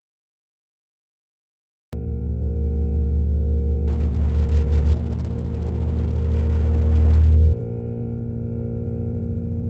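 The clip opens on dead digital silence that breaks off abruptly at 1.93 s, with the sound already underway: no attack, no fade-in, just a hard edge into the middle of an event. This is a cut-off start. Capture or streaming began late, so whatever preceded 1.93 s was never recorded, and the audio jumps straight from nothing into a sound in progress.

From 3.89 s to 7.69 s the audio turns coarse and watery, with the top end dulled and smeared compared with the surrounding material, which carries Opus's usual coding texture up to around 12 kHz. That is a call bitrate drop. The call's bandwidth estimate fell and the encoder was pushed from 32 kbps down to 9 kbps, holding at that floor for about two seconds. At so few bits Opus quantises far more crudely and trims the high frequencies, until the rate climbs back.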